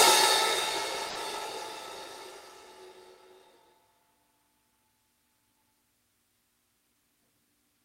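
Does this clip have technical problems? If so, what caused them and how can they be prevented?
Yes. A burst of packet loss at 1.09 to 1.18 s is concealed by about 60 ms of repeated, fading sound, then the audio jumps ahead, skipping 60 ms. A spectrogram shows smeared, fading frames and then an abrupt discontinuity. A jitter buffer with forward error correction or redundant packets, on a more stable network, would prevent it.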